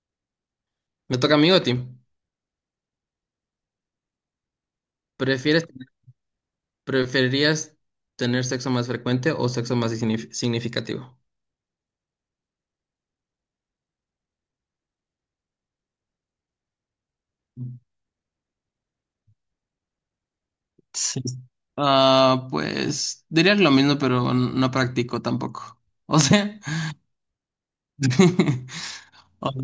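No technical faults can be heard anywhere in this speech recording.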